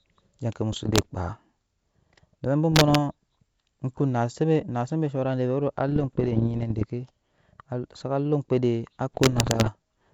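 A speech clip carried over G.722 wideband coding, with bit errors on an ADPCM link at 0.73–1.07 s, 2.72–2.97 s, 5.88–6.86 s and 9.13–9.70 s. Each corrupted code throws off the decoder's step size and predictor, producing pops, rough bursts and brief level jumps. The error rate is around 1 percent, heaviest in the final burst.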